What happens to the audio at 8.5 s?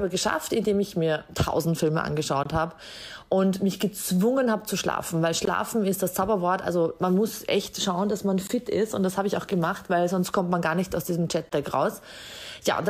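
A brief, hard-edged dropout cuts the sound from 8.47 to 8.49 s: a 20 ms hole of silence that starts and stops abruptly. This is a gap between chunks. The audio appears to be handled in 3.0 s blocks, and at this join empty time is inserted between the pieces. Nothing is missing from the material itself; it is simply interrupted at the boundary.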